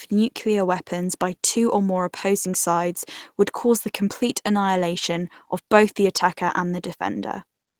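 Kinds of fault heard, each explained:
No kinds of fault are heard in this speech clip.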